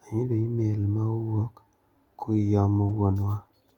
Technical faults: clock drift between sender and receiver; repeated timing corrections

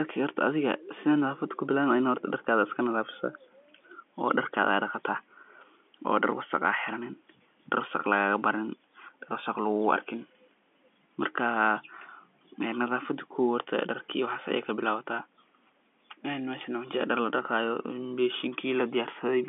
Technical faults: none

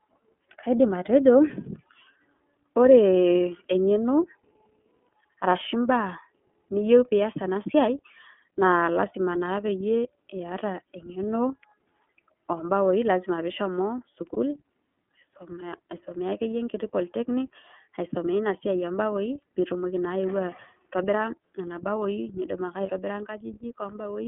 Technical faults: iLBC codec; lost iLBC frames

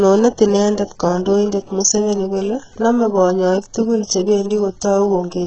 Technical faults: HE-AAC compression

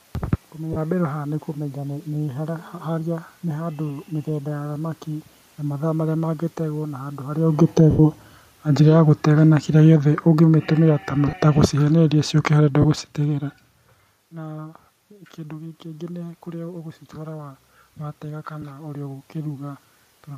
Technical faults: lost LE Audio frames; automatic gain falling; automatic gain rising

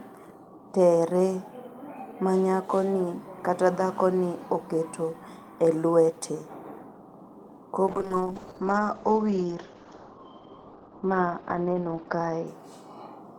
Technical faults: call bitrate drop

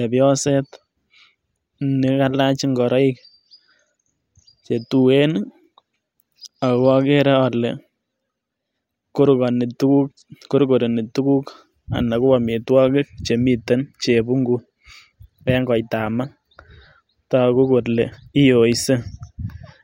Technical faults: none

